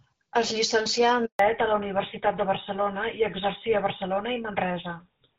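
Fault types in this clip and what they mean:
Handover gap: Right after "llicencià en", at 1.25 s, the speech cuts out and stays silent for 140 ms until 1.39 s, and whatever was said then is gone. The call was passed between networks, and no speech frames reached the receiver during that switch.
Fallback to narrowband: From 1.39 s to the end, the speech turns duller and rougher, with nothing above 4 kHz. The call dropped from HD Voice to an older narrowband codec, which fits a step down from AMR-WB at 12.65 kbit/s to GSM full rate.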